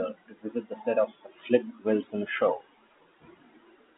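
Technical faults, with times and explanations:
Nothing here counts as a fault; the speech just has the narrow, boxed-in sound of an ordinary phone line, with its band running from about 200 Hz to 3.5 kHz, which fits standard G.711 telephone coding.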